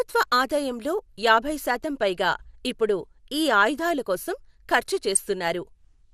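From the start, the speech is dull and gurgly, a sign of likely MP2 compression. The damage is plainly audible. The coder splits the sound into 32 sub-bands and shares out a limited pool of bits. There are too few bits here, so upper bands switch off and flicker back. The bands that remain are quantised coarsely, which gives a granular edge. The thinness fits a rate of around 80 kbps.

At 5.15 s there is a brief burst of DAB burbling. It is a quick blip of noise laid over the speech. It sounds as if weak reception let a small fraction of a percent of bits slip past error correction. Corrupted samples put short blips of noise into single sub-bands. The burst is very short, which points to only a few frames being hit.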